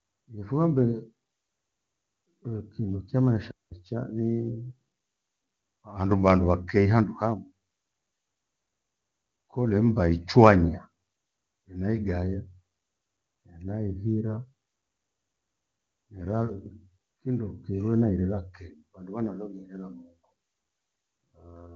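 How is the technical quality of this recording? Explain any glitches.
There is one audible glitch, a short gap in the speech early on. The AMR-wideband (HD Voice) coding sounds clean, which fits its top rate of about 23.85 kbit/s.

Playback stall, 3.51 to 3.72 s: the player likely ran out of data or was blocked, so the speech drops to silence for about 0.21 s, then continues.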